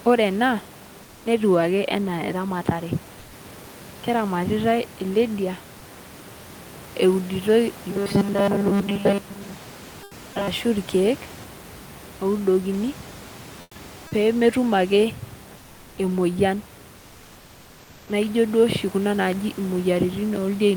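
A speech recording, with room noise sitting about 23 dB below the voice, shows two kinds of fault. Comfort noise in place of the background appears in four pauses: 3.19 to 3.33 s, 10.03 to 10.11 s, 13.61 to 13.75 s, and 16.97 to 18.07 s. There, the real room background gives way to a smooth, featureless hiss, about 2 dB quieter in most cases and about 7 dB quieter at 13.61 s. The likely cause is Opus discontinuous transmission: the sender goes quiet when no speech is detected, and the receiver substitutes synthetic noise until the voice resumes. Robotic sound from repeated short buffers runs from 7.91 to 10.48 s. The voice takes on a rigid metallic buzz at 200 Hz that still tracks the speech loosely, and the fixed pitch fits a 5 ms chunk being replayed over and over. Most of that stretch is repeated material rather than fresh audio, which likely points to late-arriving data being covered by looping the last buffer.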